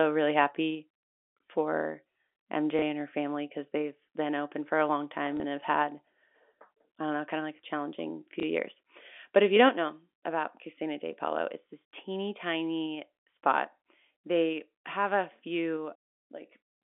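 At 2.79 to 2.82 s, 5.37 to 5.40 s and 8.40 to 8.43 s the speech gives a small blip. Each is packet loss with the last packet repeated. About 30 ms of audio went missing, which fits a single lost packet, and the receiver filled the gap by playing the previous stretch again before fresh audio resumed.

From 9.37 to 9.65 s the loudest syllables take on a harsh, crackly edge. This is microphone overload. The peaks likely ran about 2 dB past the converter's limit, so their tops were sheared flat. Only a small fraction of the samples were cut, under one percent, which is why the effect is a rough, gritty bite on the strongest moments rather than a constant buzz.

Right after that distortion, at 9.69 s, the microphone volume steps down. Speech and background together drop by about 6 dB in a single abrupt move, with no gradual fade. The likely cause is the call software reacting to the clipped peaks just before and cutting the device's input volume in one step. 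Everything after that point sits noticeably quieter, heard through the narrow 250 Hz to 3.5 kHz band of the G.711 telephone line.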